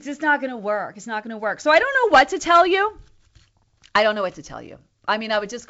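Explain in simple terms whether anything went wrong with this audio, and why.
Nothing went wrong here; this speech simply comes through a wideband phone line using G.722 wideband telephone coding, which is why the sound stops a little below 8 kHz, and that's just how a good wideband call sounds.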